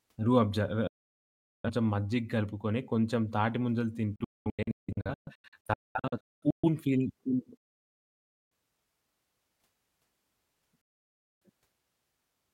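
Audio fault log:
0.87–1.70 s, 4.16–6.69 s, 7.57–8.52 s, 10.81–11.46 s: digital broadcast dropout. The receiver lost good frames and muted. Each mute fades in 3 ms, so the speech cuts off abruptly. From 4.16 to 6.69 s it breaks into short holes, the longest 0.21 s. The missing audio never returns.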